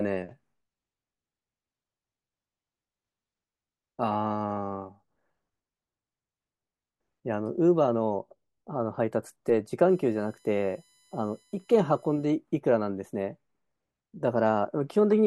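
From 9.89 to 12.25 s there's USB whine, a faint fixed tone built on 1 kHz, strongest at 7 kHz, from the bus's 1 ms frame current leaking into the audio.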